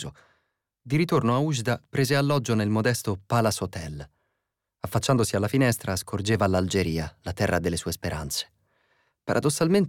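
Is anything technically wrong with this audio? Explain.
No, no technical faults heard.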